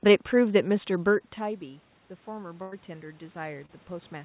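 From 0.96 s to the end, automatic gain rising follows a drop of about 16 dB at the microphone as the talker moves back, lifting voice and room noise together. At 2.62 to 2.74 s, a burst of packet loss leaves roughly 100 ms missing, filled by a fading continuation of the last sound before speech resumes further on. At 3.66 to 3.71 s, a short concealed packet loss bridges about 20 ms of missing audio with a brief smear. Throughout, the band-limited call path cuts everything above 4 kHz, which fits G.711 narrowband coding.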